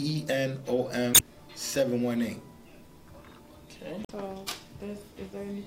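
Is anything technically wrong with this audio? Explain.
Yes. Damaged data in a compressed stream garbles the sound from 1.11 to 1.21 s and from 4.01 to 4.10 s. Corrupt frames desynchronise the decoder, producing brief disruptions while it searches for the next frame header.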